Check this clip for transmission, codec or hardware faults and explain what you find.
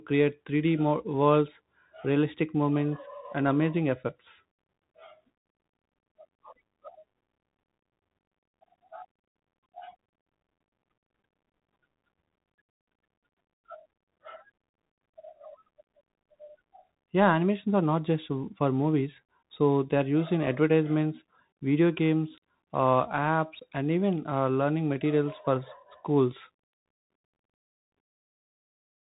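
One fault runs through the whole clip: the speech has passed through a Bluetooth CVSD headset codec. From start to finish, a one-bit delta modulator tracks the waveform only up or down with an adapting step, consistent with a 64 kbps link, and nothing above 3.8 kHz survives. S sounds turn scratchy, loud bright sounds distort where the step lags, and a granular hiss sits beneath. A spectrogram shows a hard ceiling at 3.8 kHz over a speckled noise floor.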